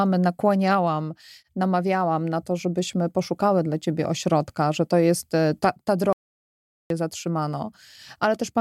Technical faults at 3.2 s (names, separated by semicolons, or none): none